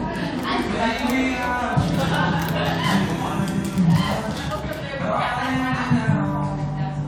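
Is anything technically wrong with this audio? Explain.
No, nothing is technically wrong with this audio.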